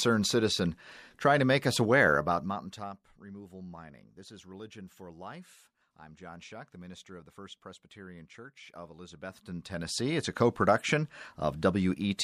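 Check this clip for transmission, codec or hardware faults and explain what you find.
One fault appears twice: zipper noise. From 2.12 to 3.08 s, after "trying to make us", the level falls about 20 dB. From 9.04 to 10.32 s, before "co production", it rises about 20 dB. The gain moves in unsmoothed 1 dB steps, roughly 30 per second. Each step clicks, giving a fine ticking under the speech.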